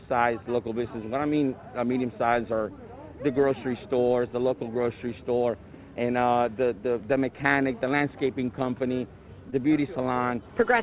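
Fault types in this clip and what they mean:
Short concealed packet loss: About 20 ms of audio never reached the decoder in time, near 9.5 s. The receiver covered the gap by extending the sound just before it, then blended back into the real signal by 9.54 s. The patch is heard as a brief smear or wobble rather than silence. Any very short sound in that instant may be lost. The call codec's band limit, with nothing above 4 kHz, carries on unchanged through the repair.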